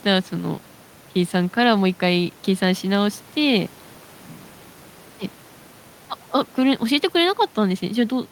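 Speech recording, no technical faults detected anywhere in the clip.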